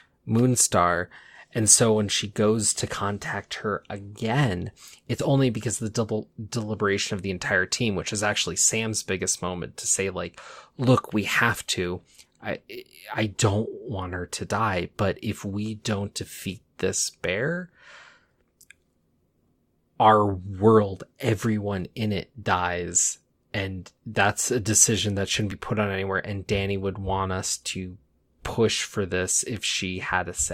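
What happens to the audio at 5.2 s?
At 5.19 to 5.22 s, compressed frames are skipped. The speech jumps forward by about 40 ms, which fits two missing 20 ms codec frames. Those frames were either absent from the stream or rejected by the decoder as damaged, so nothing was played for them. The audio on either side is joined directly, so the speech jumps abruptly at that point.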